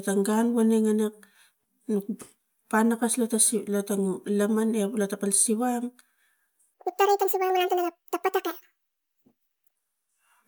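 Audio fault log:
6.74–9.76 s, section at the wrong speed: for about three seconds this stretch of speech is played back 1.78 times faster than it was recorded, most likely because the playback or editing chain ran that portion against the wrong clock. Because speed and pitch are locked together in plain resampling, the voice jumps up by about ten semitones and turns thin and chipmunk-like, and the delivery sounds rushed and clipped short.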